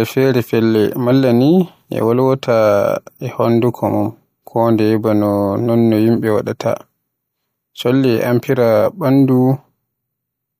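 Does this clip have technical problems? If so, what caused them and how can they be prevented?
No, nothing stood out as a technical problem on listening, so there is nothing here that needs preventing.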